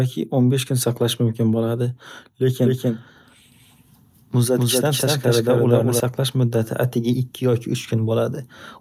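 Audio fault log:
2.64–6.00 s, doubled audio track: a second copy of the speech was most likely picked up through a slower path and mixed back in, lagging the original by roughly a fifth of a second at about the same loudness. Every syllable is heard twice with no decay or room colouring on the repeat, so it reads as a flat slapback rather than reverberation, and the copy cuts in and drops out abruptly at both ends of the span.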